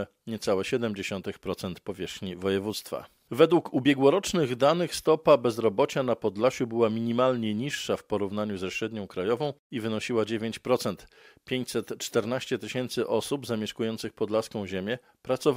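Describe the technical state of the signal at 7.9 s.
At 7.9 s the signal is inside a stretch of crude rate conversion running from 6.69 to 10.73 s. Linear interpolation without filtering, consistent with a 44.1 kHz to 48 kHz change, leaves a gritty, inharmonic fizz roughly 40 dB down. Unlike steady hiss, it rises and falls with loud, high sounds.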